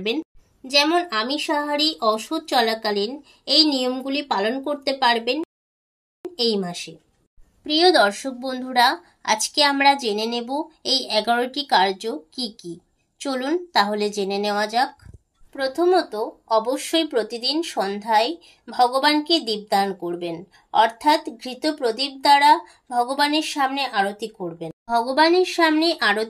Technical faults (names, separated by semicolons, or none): rebuffering stall